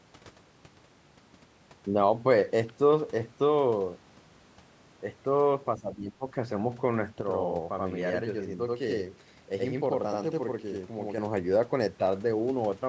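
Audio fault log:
5.78–6.24 s, speech suppressed in double talk: the voice sinks by around 15 dB, in patches adding up to a bit under half a second. This is likely the echo canceller ducking the near talker while the far side spoke, unable to separate the two.
7.21–11.18 s, channel delay (doubling): one channel runs 85.33 ms behind the other, and summing to mono gives a distinct slap copy at equal level right behind each sound. That gap fits a 4096-sample buffer, and the doubling sits on top of the usual call-style band limit topping out at 8 kHz.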